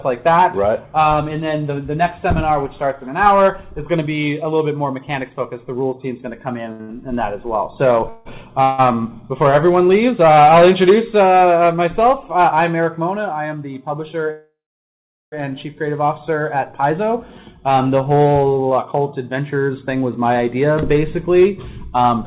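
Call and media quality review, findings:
Repeated stalls (stutter), 6.72–8.80 s. Sound drags and hiccups four times as the last sound is stretched to fill each gap, 454 ms in all, longest 159 ms, about 22% of the span. Jitter buffer underrun from late or slow packets. Nothing lost, only delayed.

Jitter buffer speed-up, 13.13–13.64 s. Sound briefly hurried at unchanged pitch, running at 107%, with around 40 ms trimmed. Second instance 18.11–20.02 s at 111%, around 200 ms trimmed, with a more noticeably rushed pace. The jitter buffer was over target and cut pitch-period-sized slices repeatedly to reduce latency.

Call audio freeze, 14.31–15.34 s. Sound halts and the held tail fades into 760 ms of silence, then resumes where it stopped. About 1.0 s of fill, with delay growing by the same amount. Jitter buffer ran dry, likely due to packets held up in transit. Nothing skipped.

Band-limited to 4 kHz throughout, which fits the 64 kbit/s G.711 A-law call path.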